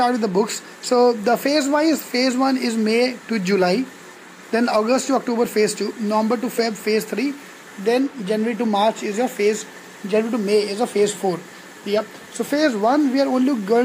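Nothing stood out as a technical fault on listening.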